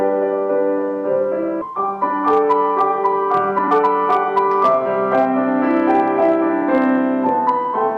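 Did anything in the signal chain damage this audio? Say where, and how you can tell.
Yes. A converter or format stage was overdriven by about 2 dB throughout, so hard clipping flattens a small fraction of peaks, adding crackle on loud moments.

In the network path or jitter buffer, a skip ahead at 1.61 s discarded about a second of waiting audio, so playback jumps forward with no gap.

The jitter buffer speed-up then trimmed pitch periods to shrink delay: 1.71–2.44 s (108%), 2.98–3.84 s (132%, clearly hurried), 4.38–5.33 s (105%) and 6.62–7.73 s (103%), faster at unchanged pitch.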